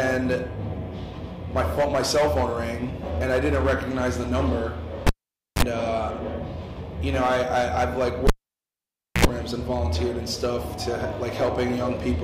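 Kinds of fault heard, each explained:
Cable pulled and plugged in: A live lead is yanked and reinserted, at 5.07 s and 8.27 s. Each time: pop, near silence, brief mains buzz, pop.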